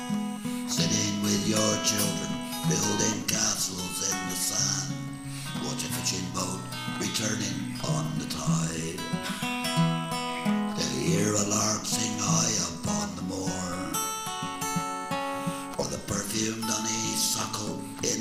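Nothing here gives me anything to flag, since the sound runs along without a single glitch, dropout or odd moment catching the ear.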